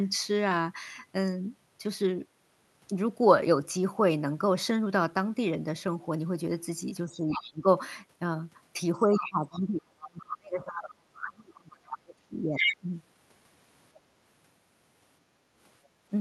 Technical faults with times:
7.05-7.66 speech suppressed in double talk
7.32-7.51 other side's voice leaking through
8.94-10.38 other side's voice leaking through
9.03-12.88 speech suppressed in double talk
11.70-12.77 other side's voice leaking through
13.95-13.99 other side's voice leaking through
15.37-16.02 background gated by the echo canceller

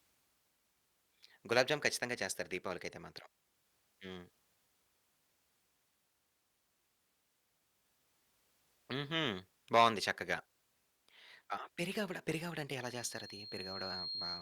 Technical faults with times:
12.83-14.42 loudspeaker feedback squeal

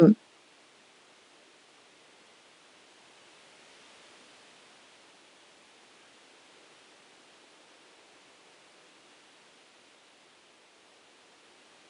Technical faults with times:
none

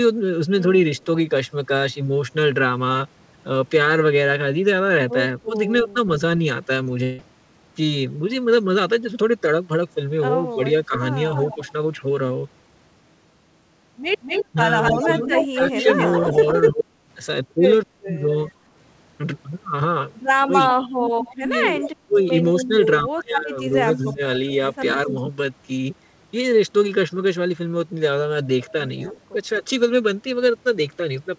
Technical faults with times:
0.98-1.05 echo leak
5.49-5.97 speech suppressed in double talk
6.84-6.87 short concealed packet loss
7.03-7.20 long network dropout
10.55-18.21 speech suppressed in double talk
10.96-25.13 echo leak
21.28-25.15 speech suppressed in double talk
29.33-29.64 speech suppressed in double talk

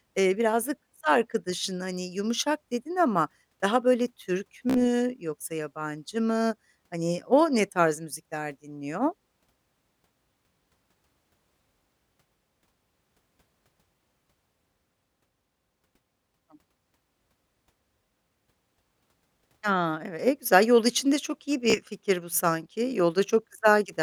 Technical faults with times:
4.70-4.79 Bluetooth stutter
21.70-21.78 Bluetooth stutter

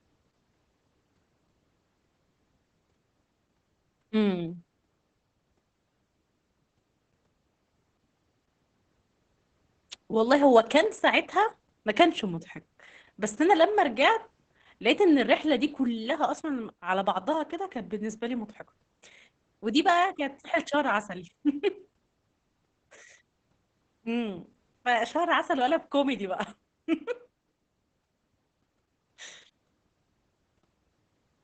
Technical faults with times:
0.00-31.44 Opus voice compression

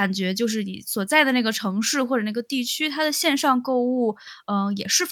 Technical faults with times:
none

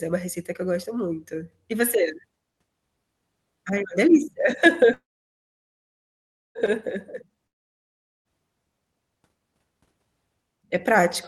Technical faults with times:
4.93-6.58 call audio freeze
7.47-8.28 long network dropout

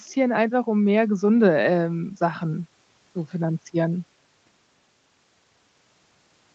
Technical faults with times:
none

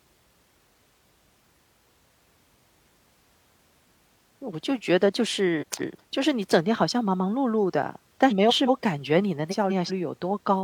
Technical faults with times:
5.61-6.00 frames out of order
8.30-8.69 frames out of order
9.51-9.91 frames out of order

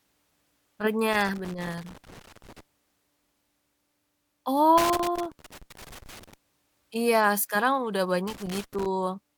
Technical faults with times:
1.13-2.60 loose connector crackle
4.78-6.34 loose connector crackle
8.27-8.86 loose connector crackle

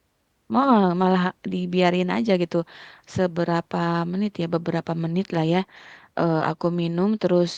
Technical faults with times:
none

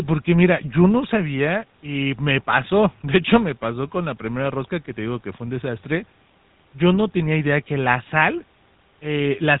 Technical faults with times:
0.00-9.60 GSM full-rate codec

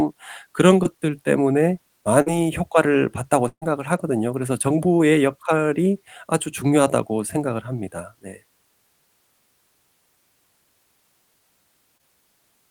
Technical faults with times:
0.83-0.98 short concealed packet loss
2.22-2.28 short concealed packet loss
3.48-3.63 burst of packet loss
11.97-12.03 short concealed packet loss

